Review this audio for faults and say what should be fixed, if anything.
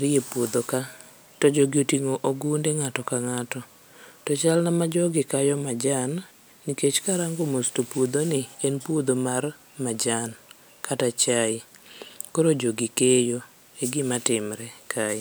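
No faults turn up in the audio, so nothing needs to be fixed.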